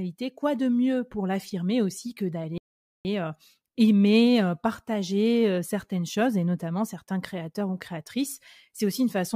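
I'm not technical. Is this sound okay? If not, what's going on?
No. At 2.58 seconds the speech suddenly drops into silence, and at 3.05 seconds it picks up again exactly where it left off, as if someone briefly pressed pause. Nothing is skipped, but almost half a second of dead air is added. This is a rebuffering stall: the player used up all the audio it had downloaded and had to wait for more to arrive before it could continue.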